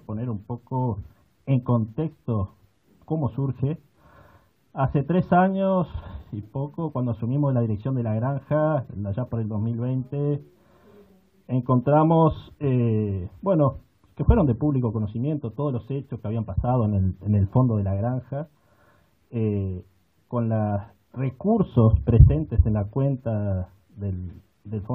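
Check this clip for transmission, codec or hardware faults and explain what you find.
Checking the clip turns up no faults to explain.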